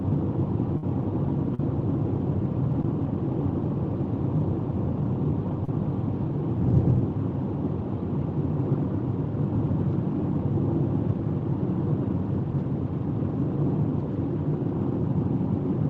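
Right at the start, from about 0.77 to 0.84 s, there's a burst of packet loss. Around 50 ms of audio never made it, so the receiver carried the last sound forward and let it fade, which comes across as a brief held buzz or dying hiss. When the sound comes back it has jumped ahead, with that stretch simply gone.

Then there are three short concealed packet losses, at 1.54 to 1.60 s, at 2.83 s, and at 5.65 to 5.69 s. These are smaller holes of about 40 ms, 10 ms and 30 ms. In each one the receiver patched the gap by extending the preceding sound and blending back in. That leaves a quick smear or wobble, and a very short transient can drop out entirely. All of this sits on top of the call codec, which tops out around 8 kHz and adds its usual coding noise, consistent with Opus running at a modest bitrate.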